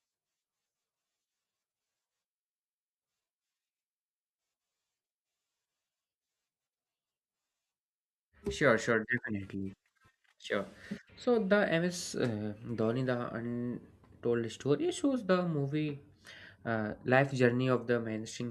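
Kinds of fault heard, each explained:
No technical fault can be heard anywhere in the speech. Nothing in the audio calls for a fault line.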